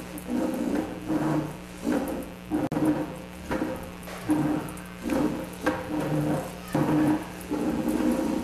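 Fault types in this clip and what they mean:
Mains buzz: a steady, raspy buzz sits only about 15 dB under the sound, built on 60 Hz harmonics from sharp switching spikes leaking in twice per mains cycle.
Gap at a join of encoded pieces: a 48 ms hole of silence with smeared edges opens at 2.67 s, where separately encoded pieces were joined with their encoder delay and padding left in.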